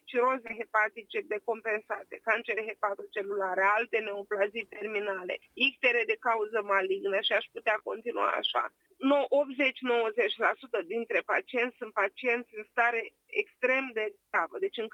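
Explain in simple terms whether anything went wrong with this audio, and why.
Four brief gaps of short concealed packet loss, at 0.47, 2.55, 4.79 and 7.79 s, each lost about 20 ms that the receiver patched over, leaving small smears.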